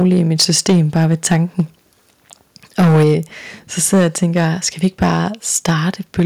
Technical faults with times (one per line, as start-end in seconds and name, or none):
0.00-1.61 microphone overload
0.02 microphone volume stepped down
2.79-3.13 microphone overload
3.03 microphone volume stepped down
3.82-4.08 microphone overload
4.36-4.41 microphone overload
4.84-5.17 microphone overload
5.55-5.70 microphone overload
6.19-6.22 microphone overload
6.20 microphone volume stepped down